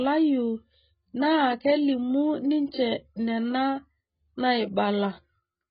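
Speech, with heavy damage from start to finish. Nothing is present above 5 kHz, so the sound is dull, sibilants lose their edge and turn fizzy, and sustained vowels carry a warbling, smeared texture. This is likely AAC compression. At a very low bitrate, which fits roughly 12 kbps, the encoder drops the upper band entirely and quantises what remains so coarsely that spectral gaps open and shift from frame to frame.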